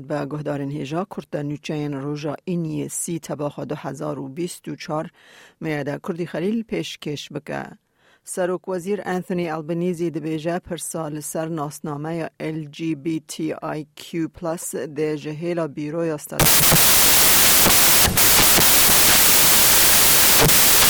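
From 16.40 s to the end of the clip, the sound turns into loud, harsh broadband noise: samples built from the wrong bytes. The reader assembles each sample's bytes in the wrong order or at the wrong offset, so the rapidly changing low bits land in the most significant position and swamp the true waveform. Unlike added hiss sitting beneath the audio, this noise largely replaces it.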